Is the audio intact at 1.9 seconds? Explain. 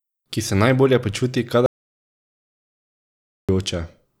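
No, 1.9 s sits inside an audio dropout to silence that runs from 1.66 to 3.49 s, right after "se najbolje počuti". The speech cuts to silence, no room tone at all, for about 1.8 s, likely a lost input while the recorder kept writing zeros.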